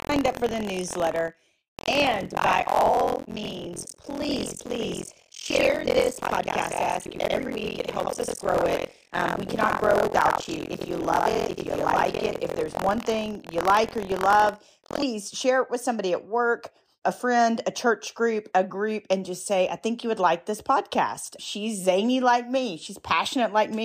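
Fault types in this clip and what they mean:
Buffer tearing: the writing program and the playback hardware have slipped so they cross inside each period, leaving most of every buffer, roughly 100 ms old, spliced in with hard joins. It sounds as a robotic 43.1 Hz buzz over the speech from 0.0 to 15.0 s, which fits a 1024-sample buffer.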